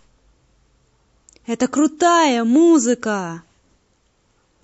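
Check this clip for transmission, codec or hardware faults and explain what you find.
There's one fault, and it runs through the whole clip: heavy MP3 compression, plainly audible. Faint detail drops in and out between frames, which gives the speech a watery, swirly edge with chirpy s sounds, likely from a low bitrate around 48 kbps.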